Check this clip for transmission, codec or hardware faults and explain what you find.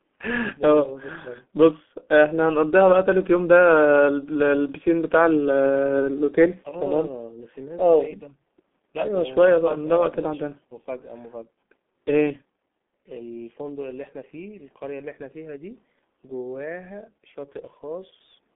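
The speech carries one codec fault from start to finish: heavy G.723.1 codec damage. The signal was squeezed through a very low-rate telephony coder whose model of the voice updates only once per 30 ms frame, and the coarse result points to a bitrate of around 6.3 kbit/s. The line band runs only from about 200 Hz to 3.5 kHz, so the speech sounds thin and muffled. The slow model smears fast changes, leaving a hoarse texture and consonants that blur into one another. The call microphone processing before the codec takes out the lowest bass, which is normal and not a fault.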